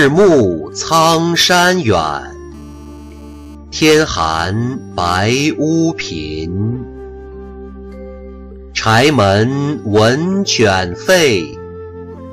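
From 2.54 s to 3.55 s there is GSM phone buzz. A nearby 2G phone in a call pulses about 217 times a second. The audio circuit rectifies those radio bursts. The result is a steady, raspy 217 Hz buzz with many harmonics, about 32 dB below the sound.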